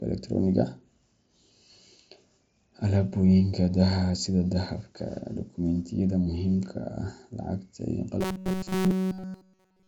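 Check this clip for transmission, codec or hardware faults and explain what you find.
One fault turns up, right at the end. From 8.21 to 9.88 s there's robotic sound from repeated short buffers: a rigid 188 Hz metallic buzz, likely from a roughly 5.3 ms chunk being replayed over essentially that whole stretch. The audio comes through the Bluetooth mSBC headset link, topping out near 8 kHz.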